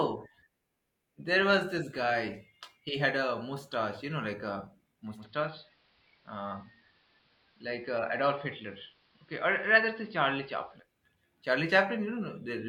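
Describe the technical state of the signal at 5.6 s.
At 5.6 s the signal is in a digital radio blend to analogue. It runs from 5.11 s, just after "you know like a", to 10.86 s. The receiver lost the digital stream and cross-faded over 160 ms to the station's AM broadcast. The level drops by about 3 dB. A hiss sits roughly 35 dB below the signal.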